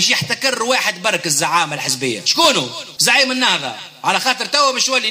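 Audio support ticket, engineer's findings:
No faults found on this one, nothing audible to chase in the capture, so the ticket can be closed from the audio side.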